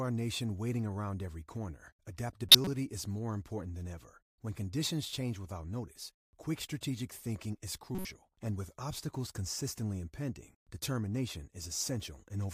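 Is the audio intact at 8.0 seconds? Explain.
No. From 7.95 to 8.05 s the speech carries a corrupt frame decoded fault: a few compressed frames, about three, arrived with flipped bits, and the decoder played them anyway. Misread gains and codes placed energy at the wrong frequencies for the length of those damaged frames, so the spurious content peaks at roughly -25 dBFS. It is heard as a brief chirpy burst of noise laid over the speech for that tenth of a second.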